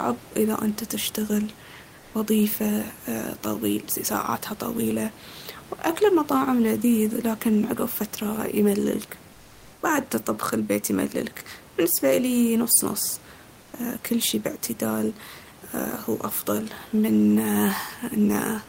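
At 1.99 s after "انته تشتغل", 9.33 s after "عقب فترة يمللك" and 13.61 s after "بالنسبة إليي نص نص", comfort noise in place of the background fills gaps of 0.14, 0.48 and 0.12 s. This is likely Opus DTX pausing transmission, and a flat synthetic hiss up to about 4 dB quieter replaces the room tone.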